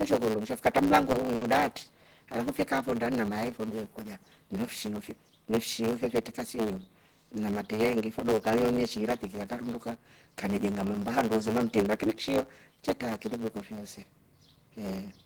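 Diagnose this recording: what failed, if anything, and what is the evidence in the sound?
The buffer stage is off for the whole clip: there's a block size mismatch (truncated) where each block loses its tail. You hear a steady 109 Hz buzz at the block rate, and the speech runs about 1.09 times fast, which fits write blocks roughly 9% longer than the reads.

On the network side there's a short concealed packet loss at 1.11 to 1.15 s. About 20 ms never arrived, and the receiver filled exactly that much by stretching the preceding sound before blending back in. It comes across as a quick smear rather than a gap.

Right after that, a burst of packet loss hits from 1.35 to 1.43 s. The receiver concealed 60 ms by continuing the last sound and fading it down, a held buzz if it was voiced or a dying hiss if not. Then the speech picks up with 60 ms gone.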